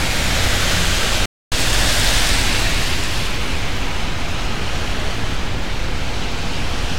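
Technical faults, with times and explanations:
1.26 to 1.52 s, playback stall: The sound cuts out in mid-flow and the output goes fully silent for about 263 ms. Nothing fades; it simply stops. When it returns, it carries on from where it broke off. The likely cause is that the player's buffer ran dry or its playback thread was held up. No new samples reached the output during that gap, so the device played silence until data arrived again.
1.52 to 3.27 s, catch-up at higher speed: Right after the gap, the audio runs fast for about 1.75 s. It plays at 1.15 times normal speed, and the pitch rises by about two semitones. Everything sounds hurried and slightly higher. The player is draining the backlog built up during the stall. It resamples to play faster and win back the lost time. Speed and pitch then return to normal at 3.27 s.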